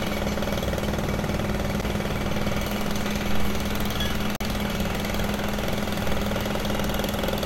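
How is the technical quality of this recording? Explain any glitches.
Two dropouts mar the recording, both blocks of digital silence. At 1.81 s the sound vanishes for about 11 ms, which fits a 512-sample buffer. From 4.36 to 4.41 s a 43 ms gap fits a 2048-sample block. Each time, the output apparently wasn't filled in time, so zeros went out instead. The hard edges give a sharp tick at 1.81 s and an audible little hole at 4.36 s.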